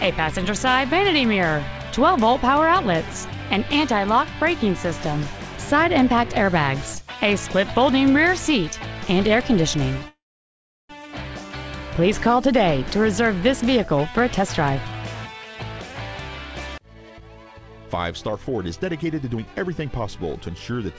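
The audio comes through a call path whose sound stops at 8 kHz, which fits G.722 coding at a high rate. From 10.08 to 10.91 s there is a call audio freeze, likely because delayed packets left the jitter buffer empty. The receiver briefly extends the last sound before it dies away into about 0.72 s of silence. Playback then resumes exactly where it stopped, so nothing is lost, but everything afterwards arrives about 0.81 s later. Later, the jitter buffer holds more than its target and begins cutting out tiny pitch-period slices to catch up. That jitter buffer speed-up makes the sound run fast without any change in pitch. It happens at 14.00 to 14.76 s at 113% speed, dropping roughly a tenth of a second. It happens again in a sharp jump at 16.78 to 16.85 s at 191%. The last and longest stretch, 18.29 to 20.88 s at 119%, removes about half a second, and this run sounds noticeably hurried.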